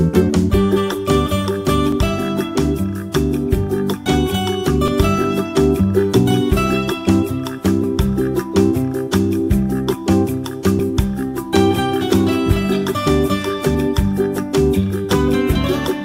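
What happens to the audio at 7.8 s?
At 7.84 s there is a skip: roughly 40 ms of sound is missing, and the two sides are butted together with no gap. The waveform shows an abrupt jump, and the spectrogram a thin vertical line. This is likely audio missing between chunks, consistent with 3-second chunks.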